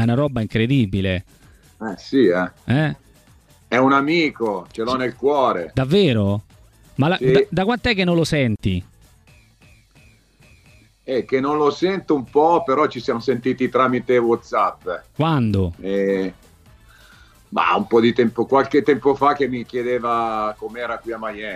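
No technical faults are audible.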